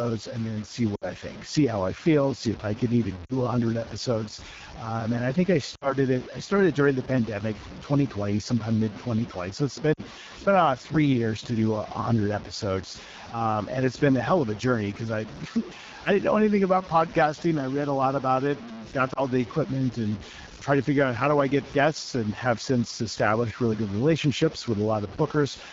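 Speech runs through a phone path here, with three things going on. Throughout the 26 seconds there's a grainy, gritty distortion that rides along with the speech, roughest on quiet passages and tails, where the level sputters between a couple of coarse steps. It sits roughly 20 dB under the signal, and it's likely low bit depth without dither: plain truncation to something like 5 bits, so the rounding error tracks the waveform instead of becoming a steady hiss. On top of that is the AMR wideband (HD Voice) codec damage, which is plainly audible. The speech has that raspy, buzzy edge, and the top band above 6.4 kHz sounds like shaped noise rather than real detail. That roughness points to one of the lowest AMR-WB modes, around 8.85 kbit/s, well short of the rates where it stays clean. Then there are lost AMR speech frames at 0.95–1.11 s, 3.26–3.38 s, 5.75–5.96 s, 9.93–10.01 s and around 19.13–19.21 s. 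The missing stretches run about 60 ms, 40 ms, 60 ms, 40 ms and 20 ms. Each time, the decoder holds the last good pitch and vocal-tract settings with falling gain, so the single lost frame gives a quick warble or dip, and the longer runs fall to near silence within two frames rather than a clean gap. The speech comes back a touch weak and rough for a moment afterwards.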